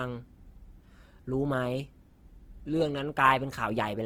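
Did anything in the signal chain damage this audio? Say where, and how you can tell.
Yes. The damage sits at the codec stage and runs through the whole speech clip. The audio keeps its full bandwidth, yet the voice sounds rough and grainy, with a noisy texture instead of clean harmonics. There are few swirling holes in the spectrum. That points to Opus compression in its music mode, likely starved of bits at a rate near 16 kbps. Short of data, the encoder fills bands with folded or noise-like content. This keeps the band energy but smears the detail.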